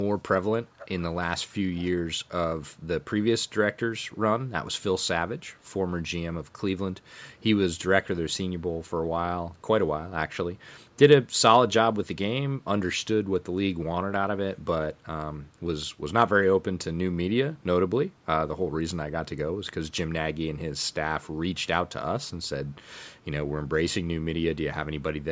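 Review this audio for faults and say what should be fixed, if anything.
Echo leak at 0.64–1.91 s, 3.99–4.18 s, 5.45–5.7 s, 7.3–7.43 s, 9.55–9.62 s, 10.3–10.97 s and 22.67–23.19 s: a faint copy of the speech returns about 367 ms late, strongest in the first stretch and very quiet later, likely from a loudspeaker whose echo canceller let residue through. Using a headset or improving echo cancellation at the far end would prevent it.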